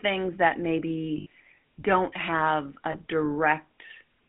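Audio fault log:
Throughout: GSM full-rate codec. Speech confined to about 150 Hz to 3.5 kHz with a buzzy, gravelly roughness from pulse-driven vocal-tract modelling, which fits 13 kbps GSM rather than generic narrowband filtering.
1.18–1.26 s and 2.92–2.96 s: lost GSM frames. Sound is held as a metallic ring, not a dropout to silence, because the last good frame's settings repeat. The first gap falls before "don't have a" and lasts about 80 ms (four 20 ms frames); the second falls after "don't have a" and is shorter.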